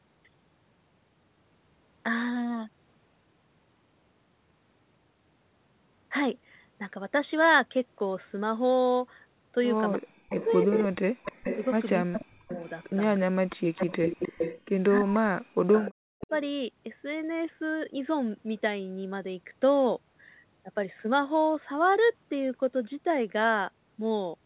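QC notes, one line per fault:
9.96–13.66 s and 15.0–16.31 s, speech suppressed in double talk: the voice dips by as much as about 40 dB and breaks up in pieces, around 1.5 s in total in the first stretch and 0.7 s in the second. This is likely an echo canceller unable to separate the near talker from loudspeaker sound while both sides spoke, so it turned both down.
10.3–14.61 s and 15.72–16.27 s, echo leak: a delayed copy of the voice trails the original by about 0.3 s, roughly 5 dB below the speech in the first stretch and about 10 dB below in the second. The far end's echo canceller likely failed to remove what its microphone picked up from its loudspeaker, and the remainder was sent back.
15.61–15.66 s, background gated by the echo canceller: the room sound drops out sharply, by about 40 dB, for about 50 ms and then returns. The canceller clamped the microphone down hard while the loudspeaker was playing and released it immediately afterward.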